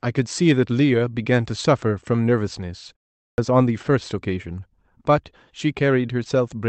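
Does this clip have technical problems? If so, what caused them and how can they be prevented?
Yes. At 3.29 s, after a 0.41 s pause, the speech shows a clipped start after a pause. About 90 ms of its opening is swallowed while the output device wakes from sleep and relocks. A muted pause only drops background and keeps every sound, but this cuts the first sounds off. Keeping the output stream running through silence prevents it.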